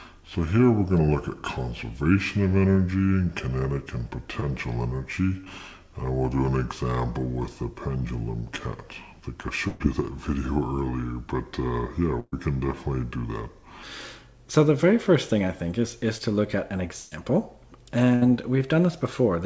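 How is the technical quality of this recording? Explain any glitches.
The recording has clear technical problems: a long stretch at the wrong speed and several packet-loss dropouts. The band-limited sound, with nothing above 8 kHz, fits a G.722 call path at 64 kbps.

Section at the wrong speed, from 0.0 to 13.83 s. The audio plays at 0.705 times its proper rate, likely because it was fitted to the wrong clock during editing or playback. Speed and pitch drop together, so everything sounds slowed, dragging and roughly a fifth lower than it should. At 13.83 s it snaps back to normal pitch and pace.

Short concealed packet loss, at 4.40 to 4.44 s, 5.44 to 5.48 s and 16.18 to 16.22 s. About 20 ms of audio failed to arrive in time each time. The receiver filled the hole by extending the preceding sound, pitched or noise-like, then blended back into the real signal. Each one is a brief smear or wobble, and a short sound can go missing.

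Burst of packet loss, at 9.68 to 9.82 s, 12.20 to 12.34 s, 17.00 to 17.13 s and 18.15 to 18.23 s. The first three each lose about 120 ms of consecutive packets, and the last loses 60 ms. The receiver kept extending the last sound while fading it, which produces a held buzz or dying hiss. At 12.2 s the fill decays into roughly 30 ms of silence. The audio then resumes further along, with the gap's contents lost.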